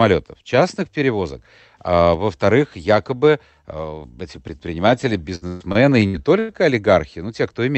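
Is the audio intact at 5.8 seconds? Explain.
No: repeated packet loss (robotic sound) spans 5.35 to 6.52 s; six gaps are filled by extending the last sound, giving choppy speech with pieces missing.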